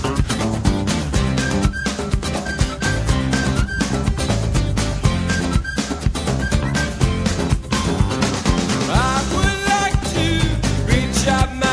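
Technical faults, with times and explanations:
No technical faults are audible.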